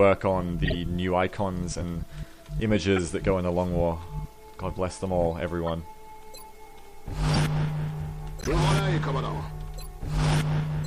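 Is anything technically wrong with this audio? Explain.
Yes. Throughout, the audio sounds watery and swirly with dulled treble and smeared attacks, likely MP3 compression at a low rate near 64 kbps. A spectrogram shows a hard high-frequency ceiling and flickering holes.

Corrupt frame decoded: there are short chirps and bursts at 0.65–0.75, 2.96–3.00, 5.66–5.69, 7.34–7.37 and 8.41–8.54 s. Each spans one to several frames, where damaged data was decoded into misplaced energy. They peak around -20 to -10 dBFS and show as bright smeared blocks on a spectrogram.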